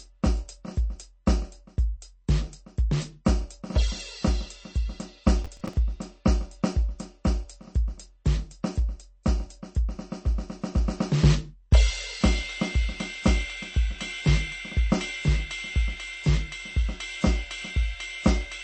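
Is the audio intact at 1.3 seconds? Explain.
No. Just before 1.3 seconds, at 1.26 s, a brief smear of hiss, about 10 ms long, sits in front of a sharp attack, and the attack itself lands soft and blurred. This is pre-echo. The codec spreads its quantisation noise across a whole transform block, so when a strong onset falls late in the block, noise sized for the loud attack also fills the quiet moment before it.

Around that moment, and through the whole piece of music, the sound is dull and watery, with swirling, metallic chirps and nothing above 8.4 kHz. That points to MP3 compression, likely at a very low bitrate around 32 kbps. Short of bits, the encoder cuts the treble at a fixed frequency and zeroes weaker frequency lines, which flicker on and off from frame to frame.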